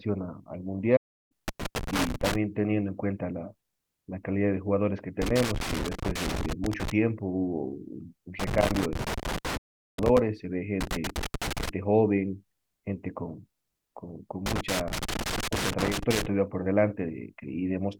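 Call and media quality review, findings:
Playback stall, 0.96 to 1.32 s and 9.57 to 9.99 s: speech cuts to clean silence for about 340 ms, then about 400 ms, and resumes. Likely cause: player buffer underrun or a blocked output thread. It differs from the crackle because the gap is silent, with no scratching, pops or chopped fragments. The second stall falls inside the 8.40 to 10.19 s crackle burst.

Loose connector crackle, 1.48 to 2.35 s, 5.22 to 6.91 s, 8.40 to 10.19 s, 10.81 to 11.69 s and 14.46 to 16.26 s: irregular bursts of scratching over the speech, each lasting about 0.9 to 1.8 s. The probable component is a worn or dirty jack or cable contact making and breaking, which chops the signal. It differs from a stall because the audio keeps running under the noise instead of going silent.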